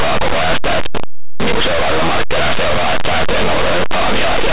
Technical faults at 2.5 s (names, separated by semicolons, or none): linear audio read as companded